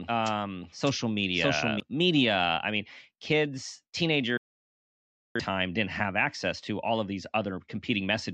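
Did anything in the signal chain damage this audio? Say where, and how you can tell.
Yes. From the very start of the clip until 1.8 s, the speech is heard twice: a second full-band copy, at roughly the same level, trails the first by about seven tenths of a second. It has no reverberant tail or room colouring, and it stops abruptly just before "media I mean kids". This is a doubled audio track, likely from the same signal being captured again through a slower path or an edit leaving two misaligned copies mixed together.

Later, right after "media I mean kids", the audio drops to silence from 4.37 s to 5.40 s and resumes at "didn't have access". Whatever was said in that span is simply gone, not muffled or smeared. That is a digital broadcast dropout at the reception and decoding stage. The receiver lost lock or rejected corrupted frames and muted for about 0.98 s, which points to roughly two dozen consecutive frames failing before clean data returned.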